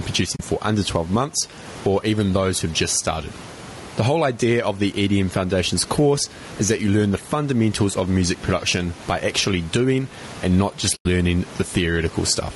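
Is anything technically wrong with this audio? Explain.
Yes. Throughout, the gain pumps by roughly 15 dB, squashing loud and soft parts closer together. This is gain pumping, likely from input gain set far too high with a fast limiter clamping it. The room noise itself sits about 30 dB below the speech, so any breathing of the background comes from gain movement, not from the room.

The whole clip sounds rough and grainy, with noise filling the gaps between harmonics and a lowered or synthetic top band. That points to low-delay AAC compression, likely AAC-ELD at about 32 kbps, whose short frames resolve pitch poorly. Unlike plain band-limiting, the damage is texture, not just missing treble.

Two soft-edged holes appear where the sound fades out and back: 0.35 to 0.40 s (about 40 ms lost) and 10.95 to 11.06 s (about 100 ms lost). This is AAC frame loss with muting. The decoder zeroed the lost frames, and its overlapping windows smoothed the edges, unlike a hard dropout's abrupt click.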